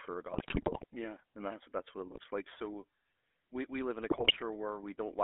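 From the start the speech has that buzzy, gravelly GSM full-rate codec sound, squeezed into a 300 Hz to 3.5 kHz band and sounding like a 13 kbps stream. GSM bit errors hit at 0.32 to 0.85 s, again at 2.10 to 2.25 s right after "yeah that's what it", and at 4.10 to 4.39 s after "we live in a". Corrupted filter, pitch and gain values turn the voice into squawks, pops and gargling there.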